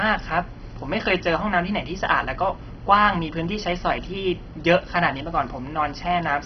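Throughout the speech, nothing sounds above 6.1 kHz, with gurgling, granular distortion. This is likely MP2 compression at a very low bitrate, with upper sub-bands switched off.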